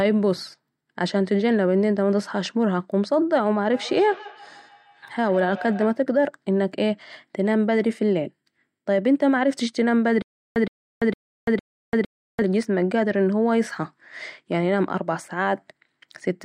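From 3.68 to 6.06 s the speech returns about every 150 ms, thinner and ringing, peaking about 17 dB below it: feedback echo between two devices, one replaying the other's microphone.

From 10.22 to 12.42 s a 118 ms burst repeats four times, each followed by 339 ms of digital silence, a stutter with silent gaps that likely comes from a stalled stream retrying.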